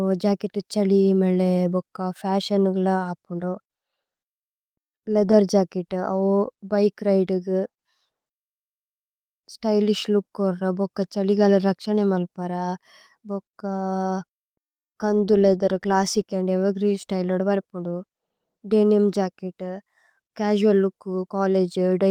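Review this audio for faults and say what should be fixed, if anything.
Nothing here needs fixing; no faults turned up in this speech recording.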